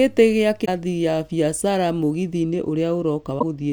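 Damaged data in the compressed stream hits at 0.62 to 0.69 s and again at 3.36 to 3.43 s. The decoder misreads the corrupted frames, loses sync and hunts for the next header, so each spot gives a brief glitch in the speech.

From 2.43 s to the end, one channel runs late by roughly two samples, a tiny fraction of a millisecond, before the two are summed to mono. This channel delay causes comb filtering, cancelling high content with a first notch somewhere around 10 kHz, so the top end sounds dulled.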